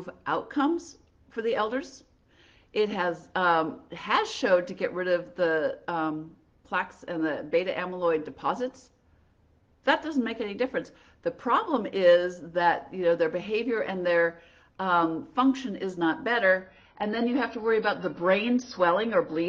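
At about 16.6 s the sound suddenly gets duller and grainier, and it stays that way to the end. That's an adaptive stream switching to a lower bitrate, presumably because the connection slowed and the player picked a cheaper version. There's no gap at the switch, just an abrupt drop in quality. Nothing above about 6.5 kHz survives, and codec artefacts creep in, which fits a move from around 96 kbit/s AAC down to roughly 24 kbit/s.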